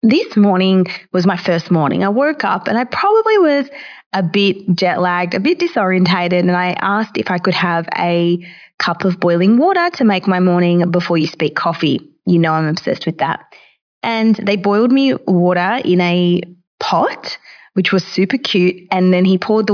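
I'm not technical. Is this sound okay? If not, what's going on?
Yes, nothing stood out as a problem when listening to this speech recording.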